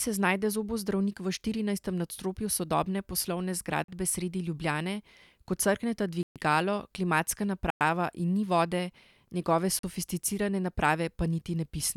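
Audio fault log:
3.84–3.88 s, block of digital silence: right after "sodobne poslovne" the output buffer likely went unfilled, which fits a 2048-sample block, so the audio drops to zeros for 43 ms with hard edges, heard as a short hole.
6.23–6.36 s, block of digital silence: after "ko crkneta" a 128 ms zeroed block gives an abrupt gap.
7.70–7.81 s, block of digital silence: 105 ms of zeros, abrupt cut and return.
9.79–9.83 s, block of digital silence: after "ni vode njegove", another 43 ms hole, likewise a 2048-sample-sized block.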